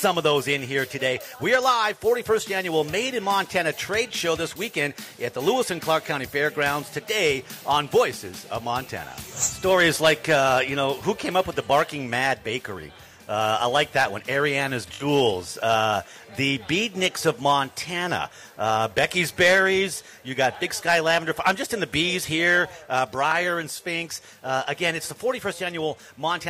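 No technical faults are audible.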